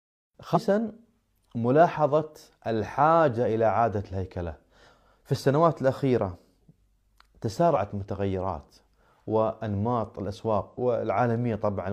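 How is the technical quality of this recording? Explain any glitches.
The recording has three brief glitches, each a short jump where the speech lurches forward: at 0.51 s (about a fifth of a second lost), 7.71 s (a small skip), and 10.68 s (roughly 0.15 s gone). These are compressed frames skipped: whole frames were missing or rejected as damaged, so the decoder jumped ahead.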